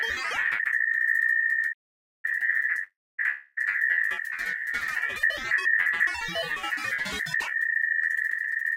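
Playback stall, 1.72 to 2.25 s: the sound cuts out mid-flow for about 510 ms, then resumes. The player likely ran out of data or was blocked.

Call audio freeze, 2.83 to 3.20 s: the last sound carries on as a fading buzz, then about 250 ms of silence. Packets were likely held up and the jitter buffer emptied. The audio then continues from where it stopped, inserting a 349 ms gap with nothing lost.

Long network dropout, 3.30 to 3.59 s: a 263 ms fading buzz fills the gap, never reaching silence. The audio returns without about 260 ms of material that likely never arrived.

Jitter buffer speed-up, 8.43 to 8.71 s: the receiver trimmed short pitch-period pieces repeatedly, about 200 ms in total, to shed excess delay. The sound runs at 179% speed while keeping its pitch, so it sounds hurried.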